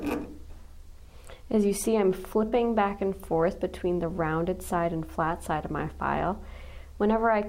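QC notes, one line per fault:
2.48–2.53 s, AAC frame loss with concealment: a smeared, noisy patch of about 43 ms, consistent with two lost frames, rebuilt by the decoder from the last good spectrum. Unlike a plain dropout, the gap is filled, not silent.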